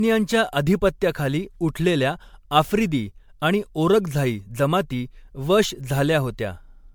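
From start to finish the speech has a swirly, hollow quality, with smeared consonant attacks and a watery sheen that's worse than a single MP3 pass at around 96 kbit/s would give you. That points to generation loss, likely from the audio being decoded and re-encoded about five times. Each pass requantises on a shifted frame grid, so the noise and spectral holes stack up, even though the top end still reaches 20.1 kHz.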